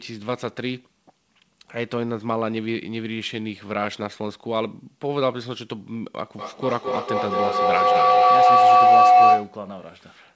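From 6.38 s to 9.66 s a feedback howl takes over the speech. A microphone and a loudspeaker on the same call form a loop that adds level on every pass, so the repeats swell instead of dying and settle near 700 Hz, peaking about 12 dB above the speech. The loop's round trip is roughly 200 ms. On a spectrogram this is a bright horizontal line near 700 Hz, inside a band that stops at 8 kHz. The waveform shows a rising envelope.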